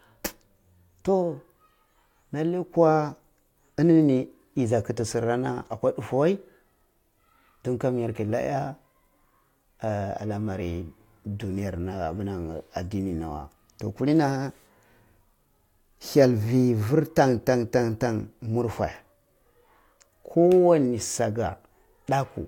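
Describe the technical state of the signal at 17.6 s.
At 17.6 s the audio is intact, with no audible fault at that moment.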